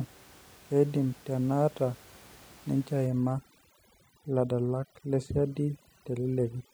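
From 3.07 s to the end at 6.74 s, overdone noise removal sets in. The reducer is too aggressive, cutting any band near its noise estimate and taking quiet speech detail too. The background, room noise about 26 dB below the speech, drops and breaks up into twinkling specks.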